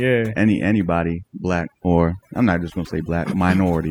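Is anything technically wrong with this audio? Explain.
Yes. Throughout the clip there's overdone noise removal. The noise reduction was pushed too hard, so frequency bands near the noise estimate get pulled right down, taking the quieter parts of the speech along. You hear the background drop away and break up into little twinkling specks.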